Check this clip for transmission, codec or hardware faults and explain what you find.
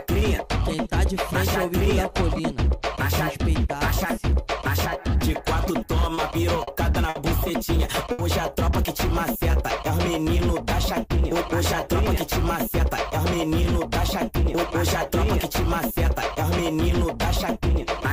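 Three network-delivery faults are present, all from late-arriving packets and the receiver's handling of them.

Repeated stalls (stutter), 5.87 to 7.17 s: packets kept arriving behind schedule, so the jitter buffer emptied four times in this stretch. Each time, the receiver extended the last sound until fresh data arrived, covering 140 ms in total, about 11% of the span, with the longest gap 60 ms. Nothing is lost, but the sound drags and catches in short hitches.

Short stall from a late packet, 8.12 to 8.21 s: a single packet was due before it came, as the transit delay jumped by 70 ms and the jitter buffer ran dry. The receiver held the preceding sound for 70 ms, then resumed exactly where it had stopped. Nothing is skipped. Instead, one sound lingers too long, with a faint buzzy or dipped quality where it is stretched.

Jitter buffer speed-up, 11.87 to 15.10 s: with more audio buffered than its target, the receiver trimmed the backlog by cutting out many short slices, each one or a few pitch periods long, totalling roughly a tenth of a second. 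Pitch stays unchanged, but the audio plays about 3% fast across this stretch.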